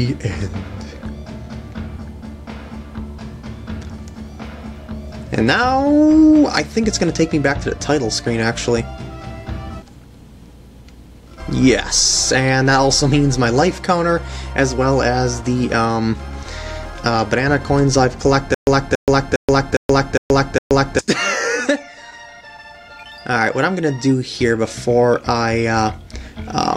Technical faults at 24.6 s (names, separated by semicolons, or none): none